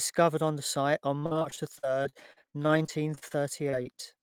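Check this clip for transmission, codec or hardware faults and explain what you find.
One transmission fault is present. From 1.19 s to 4.19 s the speech turns choppy and robotic, with small pieces dropping out. This is repeated packet loss: 25 gaps, the longest 47 ms, were patched by extending the preceding sound, about 20% of that stretch.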